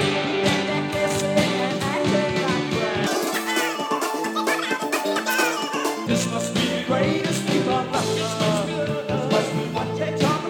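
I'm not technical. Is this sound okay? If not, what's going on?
No. From about 3.1 to 6.1 seconds, the audio was read two samples at a time, a double-speed fault. The software took each pair of tiny sound measurements as one step, as if the audio had two channels or larger samples. So it raced through the audio twice as fast. The sound jumps a full octave higher and rushes past before it returns to normal at 6.1 seconds.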